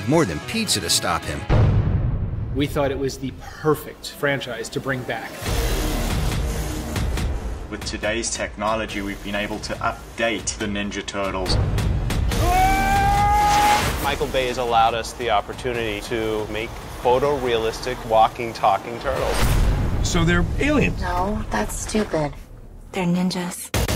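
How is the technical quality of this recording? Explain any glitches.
No technical glitches are audible.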